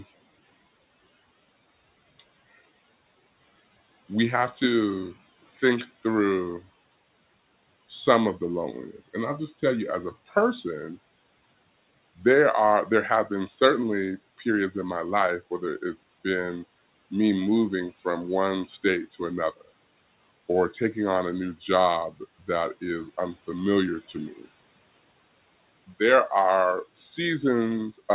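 At 5.46–5.62 s, 5.86–6.04 s and 17.94–18.03 s, speech is cut by the noise suppressor, which mistakes brief speech for background and pulls it down by about 8, 8 and 11 dB. Each stretch sounds swallowed; the waveform dips and the spectrogram fades, beneath a 4 kHz ceiling.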